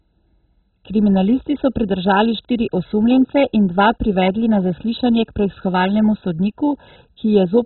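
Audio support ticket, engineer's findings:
Speech dull and band-limited for the whole clip, nothing above 4 kHz; heavy gurgling, granular distortion as sub-bands flicker and coarse quantisation takes over. Likely MP2 compression, upper bands dropped for lack of bits, consistent with a very low rate near 16 kbps.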